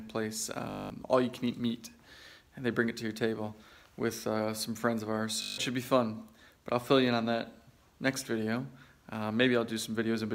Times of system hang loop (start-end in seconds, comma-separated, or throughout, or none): 0.70-0.90, 5.42-5.58